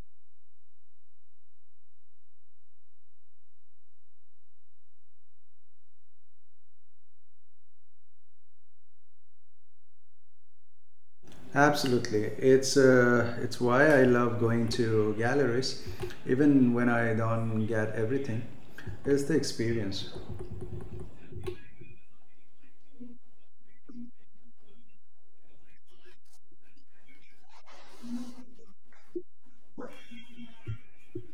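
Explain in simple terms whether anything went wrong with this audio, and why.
One thing's off here: a DC offset running through the whole recording. The entire waveform sits nudged to one side of zero instead of centred. You won't hear it as a sound, but it wastes some loudness room, so the speech can hit the ceiling sooner.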